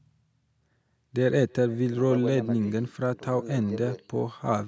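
Speech runs right through with an echo with no canceller: every phrase is trailed by a faint, thin copy arriving roughly a third of a second later, sitting about 28 dB below the talker. That's the far end playing the call out of a loudspeaker, its mic catching it, and nothing cancelling it, so the voice comes back after the network round trip. The call mic processing tops out around 8 kHz, which is just normal for this kind of link.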